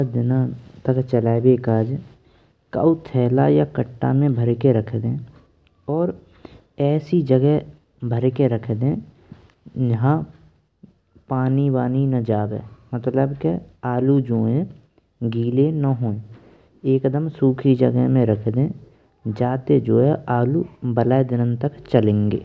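No audible technical faults.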